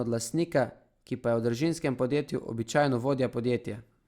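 No technical faults can be heard in the speech recording. Nothing in the audio breaks, drops out or changes character at any point.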